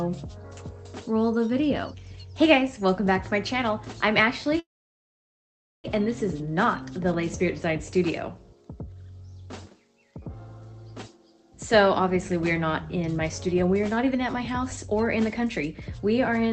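From 4.59 to 5.86 s there is a call audio freeze: the last sound hangs briefly, then about 1.2 s of silence follows before the audio resumes where it stopped. The likely cause is delayed packets draining the jitter buffer, inserting a gap while losing nothing.

From 13.29 to 16.11 s a jitter buffer speed-up runs the audio at about 109% speed with unchanged pitch. Short pitch-period pieces, roughly 0.3 s in total, are cut out to shrink the accumulated delay, so the passage sounds noticeably hurried.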